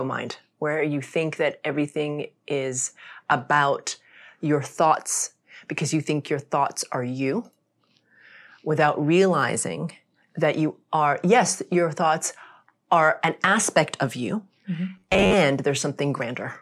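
From 14.97 to 15.34 s the speech turns into a rigid, metallic buzz near 94 Hz: robotic sound, likely from repeated short buffers of about 11 ms replacing roughly half the audio.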